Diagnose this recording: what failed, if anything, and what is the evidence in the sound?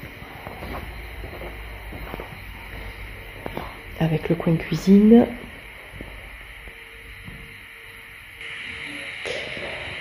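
At 8.41 s the capture chain changes character and stays changed to the end: nothing above 11.4 kHz, the level shifts by a few decibels, and a new, fainter background noise sits well under the signal, with no gap at the join. This points to the input switched to a poorer device at the driver stage, likely a different microphone. A codec bandwidth drop would narrow the band but would not bring its own noise floor and level step.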